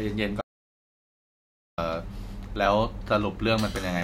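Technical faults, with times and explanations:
0.41 to 1.78 s, audio dropout to silence: the speech cuts off mid-flow and returns about 1.36 s later, with silence between and no room tone at all, unlike a noise gate's fade. The input was likely lost while silence kept being written.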